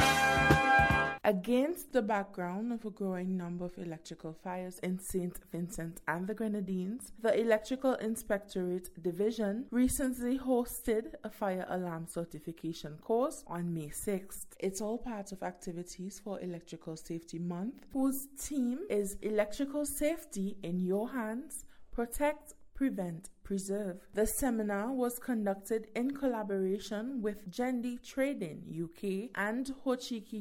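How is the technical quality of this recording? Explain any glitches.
No technical glitches can be heard anywhere in the recording, and the signal stays intact and continuous throughout.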